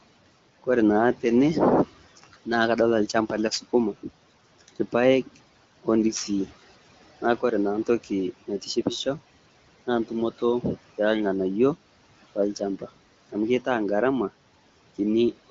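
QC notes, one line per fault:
2.17–2.47 s, 4.43–4.94 s and 12.79–13.11 s, speech cut by the noise suppressor: three short dips where the suppressor mistook bits of speech for noise and pulled them down along with the background, by about 13, 15 and 18 dB. Each swallows roughly a tenth of a second, so consonants and word endings go faint. The first lands just before "naa kadolita lchamba le". The room noise sits about 20 dB under the speech, and the HD Voice band tops out near 7.2 kHz.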